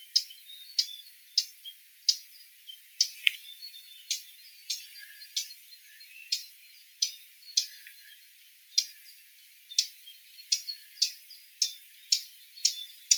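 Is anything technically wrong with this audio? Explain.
Yes. A speech-tuned noise suppressor was left running on material it wasn't built for, a noise suppressor applied to music or sounds. It treats sustained tones and decay as noise, so its gain swings by roughly 15 dB, letting attacks through while held sound sinks, giving a pumping, thinning quality across the clip.

At 1.81 to 2.07 s, 2.51 to 2.67 s, 6.83 to 7.01 s, 8.2 to 8.73 s and 9.23 to 9.7 s, there is sound cut by the noise suppressor. It judged these passages to be noise and pulled them down by about 3 to 5 dB, so sustained or fading parts dip audibly.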